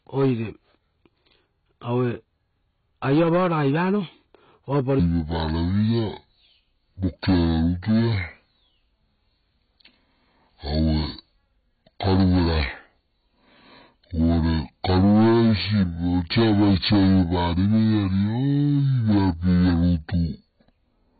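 AAC compression runs through the whole recording: nothing is heard above 4.5 kHz, and the speech sounds dull, smeared and warbly on sustained sounds and sibilants. This heavy damage is likely from AAC-LC coding at a very low bitrate, which fits roughly 16 kbps, where the encoder trims the top band and quantises the remaining spectrum coarsely.

A section at the wrong speed begins at 4.99 s and lasts to the end. Playback slows to 0.631 times normal, dropping pitch by about seven semitones, so the speech turns deep and dragging. The likely cause is this stretch being played against the wrong clock.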